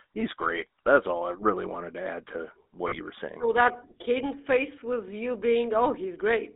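GSM full-rate codec, throughout: the speech is rebuilt from a vocal-tract model and coarse pulse excitation, leaving a plainly buzzy, gravelly roughness within a 250 Hz to 3.7 kHz band, consistent with 13 kbps GSM.

Lost GSM frames, 2.88 to 2.99 s: about 40 ms of missing audio, consistent with two 20 ms frames, is filled by repeating the last good frame, producing a brief rough, metallic ring.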